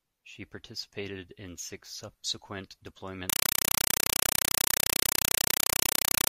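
Speech that, after "participated in six subsequent", turns at 3.30 s into a compressed stream played as audio, continuing to the end at 6.31 s. The receiving end has treated a Dolby Digital (AC-3) bitstream as ordinary PCM samples instead of decoding it. Each encoded frame comes out as a harsh noise burst of about 5.3 ms followed by silent padding, repeating 31.25 times a second. The result is loud, chattering static that completely replaces the speech.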